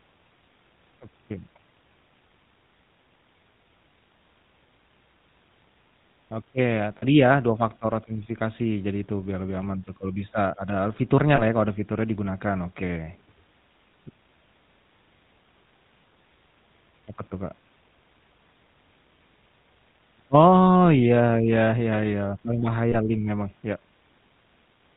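Throughout the speech, the GSM full-rate codec gives a buzzy, gravelly edge that is plainly audible, strongest on higher-pitched sounds, with nothing above 4 kHz. Unlike a simple telephone band-limit, the roughness comes from the coder rebuilding the voice from a vocal-tract model driven by a coarse, regularly spaced pulse excitation. That pulse train is what makes it grate rather than merely sound muffled, which fits the 13 kbps full-rate mode.

Lost GSM frames appear at 6.98 to 7.05 s, 11.36 to 11.41 s (just before "ya kalau ada fiturnya"), and 22.92 to 22.95 s (just before "link memang ya"). The first loss spans about 40 ms and the other two about 20 ms each. Rather than a silent gap or click, as a plain dropout would give, the decoder holds the last good frame's settings, producing a brief rough, metallic ring.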